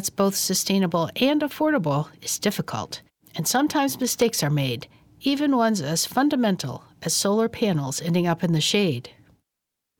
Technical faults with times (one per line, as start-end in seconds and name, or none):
4.04-4.22 loose connector crackle